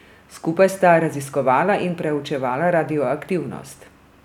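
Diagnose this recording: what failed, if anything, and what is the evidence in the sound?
Nothing in this speech recording points to a failure at any stage of the chain. There is no event in the sound to trace back to a cause.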